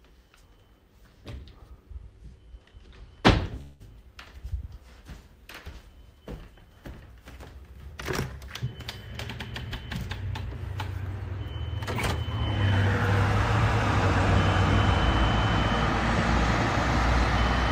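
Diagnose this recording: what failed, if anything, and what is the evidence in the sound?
At 3.61 s the sound stalls for about 0.2 s. The last instant is held as a fading buzz or hiss, and then the audio resumes where it stopped, with nothing skipped. This is a call audio freeze at the network and jitter-buffer stage, likely caused by delayed packets leaving the buffer empty. On a spectrogram it shows as a smeared band of frozen spectral content from 3.61 to 3.82 s that decays in level.

From 10.04 to 11.08 s there is a jitter buffer speed-up. The audio plays about 6% fast at unchanged pitch and sounds slightly hurried. The receiver is cutting many short pitch-period slices to remove around 70 ms of built-up delay. On a spectrogram, the harmonics stay at the same frequencies while the events are packed closer together. The waveform shows small splice points throughout that stretch.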